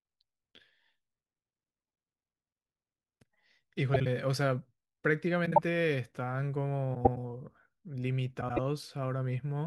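Frames out of order at 1.79–1.95, 3.94–4.07, 5.46–5.58, 6.95–7.17 and 8.41–8.59 s: two adjacent blocks, each 52 to 105 ms long, swap places, giving a garbled flutter, though no time is lost.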